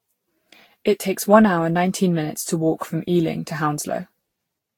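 From start to finish the speech has that swirly, hollow, smeared quality of generation loss, with blurred consonant attacks and nothing above 19.3 kHz. It most likely went through around ten lossy passes, which points to Vorbis at roughly 67 kbit/s each time.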